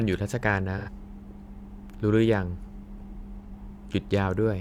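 At 0.77 s the speech smears into a brief noisy, phasey patch lasting about 85 ms, to 0.89 s. This is AAC frame loss with concealment. Audio data went missing, and the decoder patched the gap by reusing the last good spectrum with randomised phase. The length fits two lost AAC frames. A second, shorter patch follows at 3.46 s, about 43 ms long, which fits a single lost frame.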